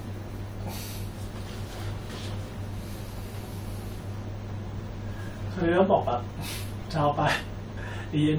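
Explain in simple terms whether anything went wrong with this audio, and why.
Nothing went wrong with this audio; the speech has no faults to point to.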